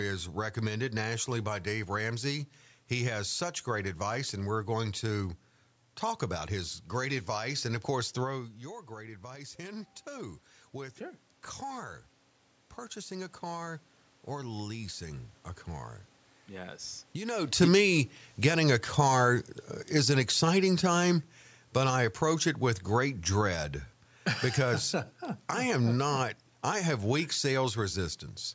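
It's a speech recording, and both faults come from the automatic gain control chasing the talker's level. Around 8 s the talker drops back from the mic and the level falls by about 14 dB, so from 8.33 to 16.82 s you get automatic gain rising. The AGC notices the input has gone quiet and slowly adds about 9 dB. The voice and the room noise swell up together over those eight-odd seconds instead of the level simply staying put. Then around 17 s the talker comes back in close, and from 17.54 to 26.24 s it's automatic gain falling. The sound starts out too hot and the AGC gradually pulls about 6 dB back off, so the voice and background sink together. Through all of it the top end stops at 8 kHz from the call microphone processing, which is just how that path behaves.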